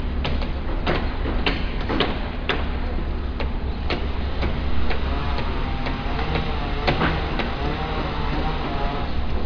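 Nothing in the sound stood out as a technical fault on listening.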